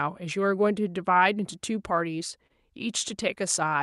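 A short stall from a late packet shows up in this speech clip at about 2.47 to 2.52 s. A packet didn't arrive in time, the jitter buffer ran dry, and the receiver held the last bit of sound for roughly 29 ms until the packet showed up. Playback then carried on from the same point, so nothing's lost, just a smeared hold with a slight buzz or dip, with everything after it landing about 29 ms late. It's on a call path whose top end stops around 12 kHz, consistent with Opus.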